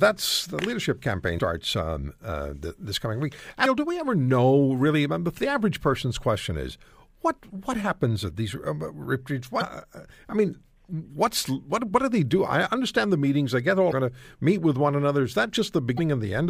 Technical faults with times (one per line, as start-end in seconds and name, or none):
1.35-1.39 damaged data in a compressed stream
3.62-3.66 damaged data in a compressed stream
9.58-9.62 damaged data in a compressed stream
13.89-13.93 damaged data in a compressed stream
15.95-15.99 damaged data in a compressed stream